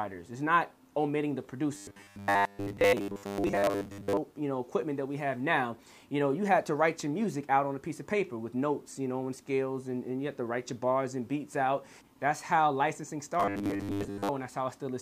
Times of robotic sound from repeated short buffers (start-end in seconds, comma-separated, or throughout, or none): 1.75-4.17, 13.40-14.29